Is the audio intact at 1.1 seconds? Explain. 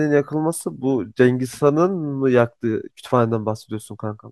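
Yes, at 1.1 seconds the speech plays through cleanly, with no dropout, click, distortion or other fault at that moment.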